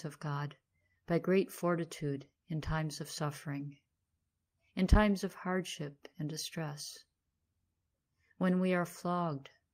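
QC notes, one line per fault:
No faults heard in this clip. Nothing in the sound calls for a QC line.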